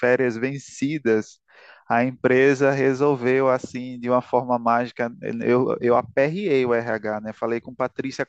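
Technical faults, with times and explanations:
No technical faults can be heard in this speech clip. There are no times to report.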